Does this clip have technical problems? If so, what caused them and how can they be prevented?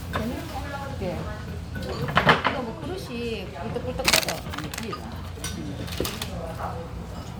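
No, there are no technical faults in this recording of sounds. With nothing going wrong, there is nothing here that needs preventing.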